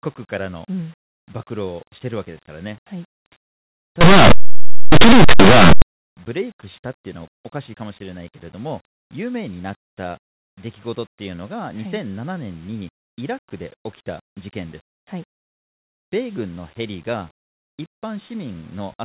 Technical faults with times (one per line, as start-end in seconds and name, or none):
4.01-5.82 linear audio read as companded